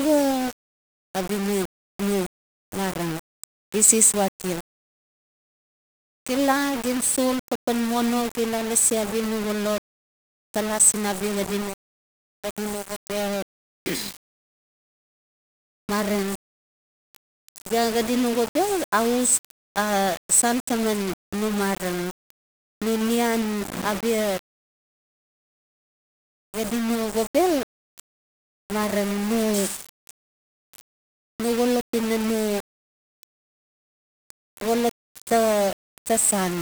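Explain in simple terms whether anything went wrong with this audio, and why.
Something did go wrong, and it lasts the whole clip. The speech has a grainy, crunchy roughness that rises and falls with the voice. The likely cause is low bit depth without dither: the sound was stored with very few levels, about what 5 bits allows, and each moment was rounded to the nearest level. Dither would have left a steady hiss, even between words. Here the grit follows the voice and drops away when the speaker stops.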